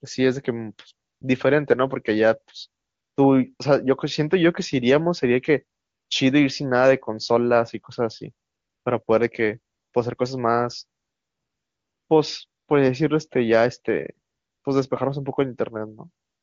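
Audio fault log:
1.07 to 16.43 s, AMR comfort noise: eleven pauses, lasting from 20 ms up to about 1.1 s (the longest at 11.01 to 12.09 s), where the phone judged the talker silent and stopped sending speech frames. The receiver filled each gap with synthetic noise built from a coarse level and spectrum estimate, so the real background drops out and a smooth, steady hiss switches in and out. The surrounding wideband speech sounds clean, which points to a high AMR-WB rate.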